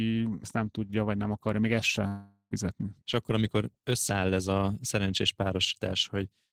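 A speech clip. At 2.07 s the sound turns into a fading buzz, then about 80 ms of silence follows before audio resumes at 2.54 s. This is likely a long network dropout, with roughly 440 ms lost.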